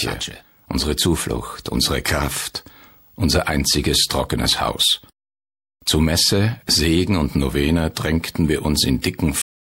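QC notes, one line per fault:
9.42 s, cut-off end: the sound stops dead mid-event and drops straight to digital silence for the last 0.38 s or so, with no tail or decay at all. The final buffers never got written or played, so the audio just ends abruptly.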